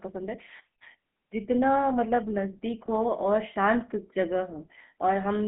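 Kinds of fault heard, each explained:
GSM full-rate codec: Vocal-tract model driven by sparse pulses, with speech confined to about 150 Hz to 3.4 kHz, fitting 13 kbps, and a plainly audible buzzy, gravelly roughness throughout.
Lost GSM frames: From 2.86 to 2.89 s a dropout is concealed by repeating the previous frame, leaving a brief rough, metallic ring consistent with one lost 20 ms frame.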